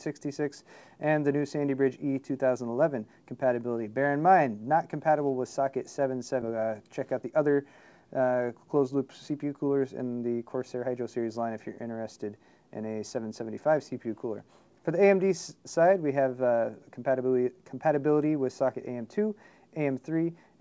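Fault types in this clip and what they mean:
Skip ahead: at 6.42 s roughly a second of audio is dropped and the two sides are joined directly, so playback just lurches forward.
Jitter buffer speed-up: the buffer is running too full, so it trims tiny pitch-period slices, running about 10% fast around 7.1 to 7.5 s and 8.2 to 11.2 s.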